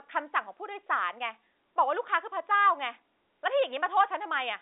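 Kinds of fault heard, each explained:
No kinds of fault are heard in the speech, which comes over a G.711 telephone line with nothing above 3.8 kHz.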